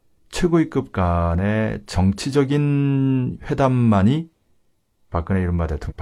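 Compressed frames skipped at 5.87 to 5.93 s, near the end of this speech clip: the decoder jumps past roughly five frames of about 42.7 ms each, around 200 ms of audio, so the sound leaps ahead.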